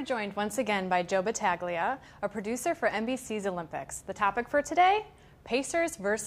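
No faults can be heard anywhere in the clip.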